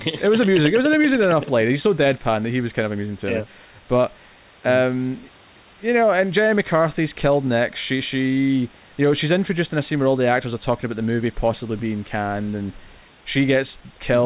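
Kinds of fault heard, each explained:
No faults can be heard in this speech recording.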